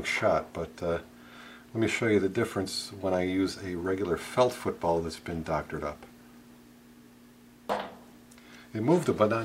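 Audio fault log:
No faults detected in this audio.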